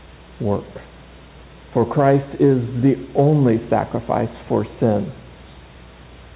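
No technical faults occur at any point, so there are none to describe in time order; the G.711 A-law call path carries nothing above 4 kHz, as that codec is expected to.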